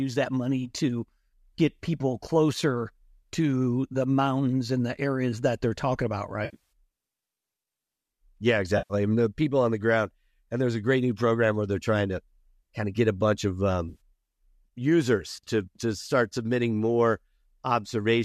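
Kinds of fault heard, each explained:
AAC frame loss with concealment: Three brief smeared, noisy, phasey patches break the speech: at 6.45 s just after "that they're talking about", about 180 ms of gaps scattered over 260 ms with the longest run near 70 ms; at 8.78 s, 120 ms just before "I mean the people"; and at 13.89 s after "get a bunch of", 80 ms spread over 120 ms. Lost frames, consistent with roughly 10 ms frames, were patched from the last good spectrum.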